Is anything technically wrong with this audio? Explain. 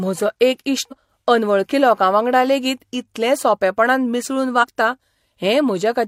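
Yes. Compressed frames are skipped twice, at 0.88–0.94 s and 4.59–4.65 s. Missing or rejected frames make the speech jump ahead, by about a fifth of a second and then a few tens of milliseconds. At each join the speech skips ahead, leaving out a piece of what is said.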